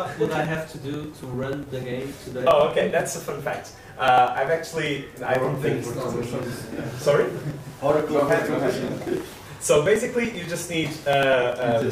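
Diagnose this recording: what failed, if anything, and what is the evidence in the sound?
Periodic USB or driver dropouts at the driver or buffer stage: from 0.06 to 11.8 s, about 2 ms is skipped every 0.098 s, producing regular ticks. These appear as evenly spaced vertical lines on a spectrogram and small jumps in the waveform.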